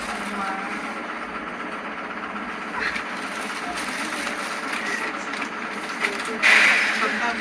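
No technical faults can be heard anywhere in this recording of sounds. Nothing in the audio stands out as a defect at any point.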